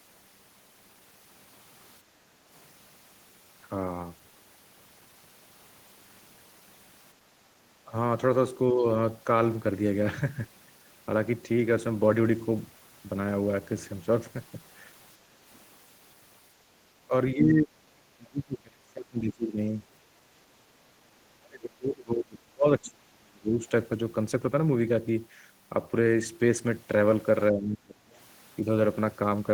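Background gated by the echo canceller appears in this speech recording from 2.02 to 2.29 s. The room sound under the talker dips by about 8 dB and then recovers, as the canceller clamps the microphone while the far end plays through the loudspeaker. Speech suppressed in double talk follows at 7.84–7.94, 8.72–8.85, 17.07–17.13, 17.34–19.59, 21.37–23.65 and 27.51–28.1 s. The short early dips are slight to moderate, and the longer stretches sink very deep. The likely cause is the canceller mistaking overlapping speech for echo and attenuating the near-end talker.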